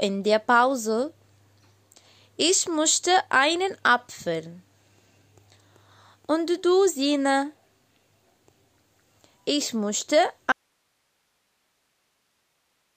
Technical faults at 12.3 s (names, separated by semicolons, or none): audio dropout to a faint residue